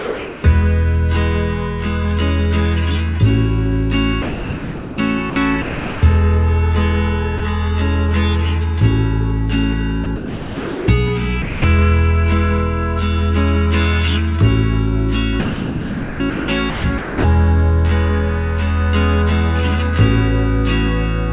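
Sound dropped by the voice detector appears at 0 to 0.44 s, 4.22 to 4.98 s, 5.3 to 5.36 s, 5.62 to 6.02 s and 7.38 to 7.4 s. The sender's detector likely judged quiet sound to be background and stopped sending, so steady comfort noise fills each gap. On a spectrogram these gaps are flat, featureless bands, and the waveform drops to a low, even level.

Sound chopped by the voice detector follows from 10.04 to 10.88 s, likely from the detector switching on and off more than once. A single drop at 11.42 to 11.64 s comes next, then a longer chopped stretch from 15.4 to 17.24 s. In these chopped stretches the waveform breaks into ragged fragments, and the spectrogram alternates between real texture and smooth synthetic noise. Everything sits below 4 kHz, the limit of the G.711 call codec.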